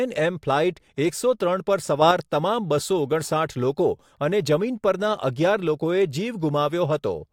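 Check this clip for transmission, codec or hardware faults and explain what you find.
One fault stands out: a sudden gain jump in the speech from 2.02 to 2.11 s. The level steps up by about 6 dB between one sample and the next, holds for roughly a tenth of a second, then returns. The likely cause is a gain setting or bit shift applied without any ramp. Unlike automatic gain control or a talker moving closer, the background noise rises by the same amount at the same instant, with no gradual slope.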